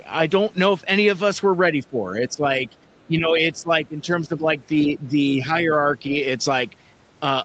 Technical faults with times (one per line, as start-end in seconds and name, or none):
1.74-1.99 speech suppressed in double talk
2.30-2.45 speech suppressed in double talk
2.67-3.04 other side's voice leaking through
3.07-4.47 speech suppressed in double talk
4.87-5.69 speech suppressed in double talk